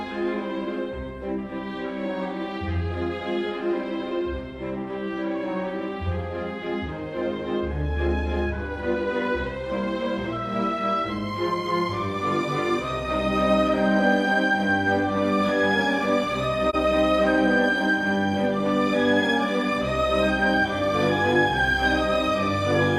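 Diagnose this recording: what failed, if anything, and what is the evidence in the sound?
Codec stage, AAC frame loss with muting: the decoder zeroed a missing frame, so the sound fades into a brief 43 ms dip at 16.69–16.75 s.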